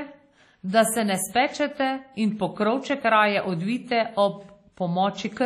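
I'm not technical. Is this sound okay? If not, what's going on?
No. The speech sounds swirly and smeared from start to finish, with hiss pulsing along with it and nothing above 15.2 kHz, likely heavy WMA compression.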